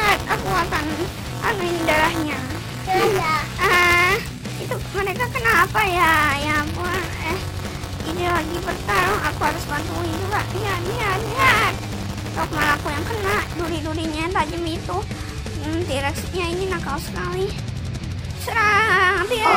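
From the start to 13.7 s, the program filling the ring buffer and the hardware reading it have slipped out of step, so their positions cross inside every period. That is buffer tearing. A small slice of each buffer, roughly a few percent, still holds audio from one lap earlier, around 20 ms old, with hard joins on either side. The result is a steady robotic buzz at 200 Hz, which fits a 5 ms period, riding on the sound whenever signal is present.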